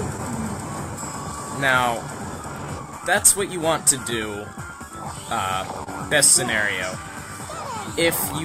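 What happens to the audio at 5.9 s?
A short stall from a late packet runs from 5.84 to 5.88 s. With the jitter buffer empty, the receiver stretched the preceding sound for about 28 ms, losing nothing, then resumed 28 ms later. It is audible as a held sound with a faint buzz or dip, and a spectrogram shows horizontally smeared, frozen bands there. Beneath this, clock drift between sender and receiver, with the sender running about 2% slow, causes small uneven timing hiccups that appear as tiny waveform splices or repeats.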